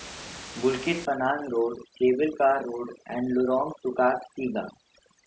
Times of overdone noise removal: 1.05-5.27

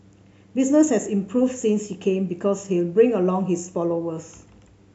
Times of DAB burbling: none

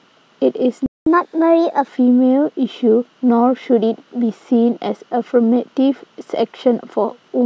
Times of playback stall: 0.86-1.06

